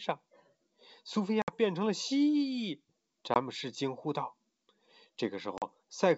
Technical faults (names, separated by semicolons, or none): packet loss on an ADPCM call